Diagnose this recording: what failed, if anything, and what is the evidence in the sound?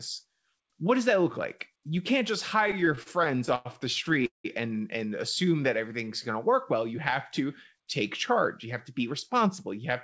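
The failure is at the network and jitter-buffer stage of the call path. The speech passes through G.722 at 64 kbps, with nothing above 8 kHz.

Repeated stalls (stutter) occur from 2.62 to 3.67 s, with 15 short holds totalling 252 ms and the longest 97 ms. They recur from 4.09 to 4.46 s as 4 holds totalling 212 ms, the longest 184 ms, concealing over half that span. Packets arrived late, the buffer ran dry, and the receiver stretched the last sound. Unlike packet loss, nothing is skipped: the speech drags and resumes where it stopped.

A jitter buffer slow-down runs from 5.45 to 6.32 s. The speech plays at 92% speed, with 76 ms added by repeating pitch periods while the buffer rebuilt its reserve. Sounds are drawn out but the pitch stays put. That distinguishes it from a clock or sample-rate mismatch, which would lower the pitch along with the tempo, and from stalls, which freeze rather than smoothly lengthen.

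A jitter buffer speed-up runs from 8.66 to 9.80 s. The speech plays at 106% speed, with about 70 ms trimmed out in pitch-period pieces to shed excess delay. It sounds slightly hurried at unchanged pitch. The cuts are spread thin across the stretch.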